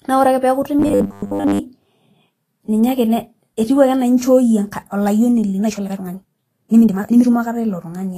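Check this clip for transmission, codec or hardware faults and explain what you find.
Three faults are audible: codec damage across the whole clip, a robotic buzz early on, and a sped-up stretch near the end.

Vorbis compression runs throughout and is plainly audible. The speech sounds hissy and grainy, with roughened tones and softened attacks. The likely cause is a low-quality Vorbis encode, consistent with a rate around 31 kbps. At that rate, fine treble detail is quantised so coarsely that it turns into noise of similar energy. Unlike the buzz described next, this damage is continuous and does not come in bursts or change the timing.

Robotic sound from repeated short buffers occurs from 0.79 to 1.60 s. The speech becomes a rigid, metallic buzz at 100 Hz that only loosely follows the original. This is likely caused by audio arriving too rarely, so the player repeated the last piece to fill the gap. 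A 100 Hz buzz fits a piece about 10 ms long, and most of the audio in that span was replaced. The fixed buzz pitch is what distinguishes it from codec graininess.

A time-stretched section runs from 5.55 to 7.31 s. The speech suddenly moves 1.72 times faster and sounds rushed, but its pitch does not rise. The likely cause is software squeezing that stretch to fit a length by dropping short pieces to keep the pitch. A steady pitch with a faster pace sets it apart from a simple speed-up, and the absence of a fixed buzz sets it apart from buffer repeats.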